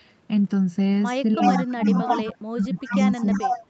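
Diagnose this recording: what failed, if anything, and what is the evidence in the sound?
In the call processing stage, the far end's echo canceller likely failed to remove what its microphone picked up from the loudspeaker, producing an echo leak. A copy delayed by 352 ms returns from 1.4 to 2.37 s at roughly the original level, and again from 2.77 to 3.66 s, about 5 dB quieter.

Speech suppressed in double talk comes from the same call processing stage. The canceller likely mistook the local talker for echo while both sides spoke and turned the speech down in bursts: about 25 dB at 1.53–1.84 s, about 15 dB at 2.06–2.28 s, and about 25 dB at 2.5–2.97 s.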